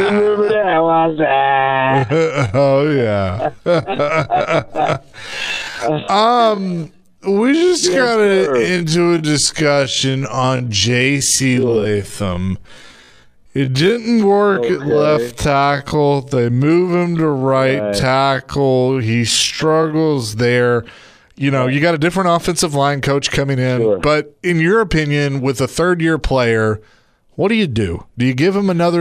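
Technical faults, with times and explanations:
0.00–20.30 s, time-stretched section: the sound runs at 0.54 times speed with unchanged pitch, unlike slow playback, which would lower it. Repeated short pieces make it drag, and the pace snaps back abruptly at 20.30 s, likely from software stretching it to fit a length.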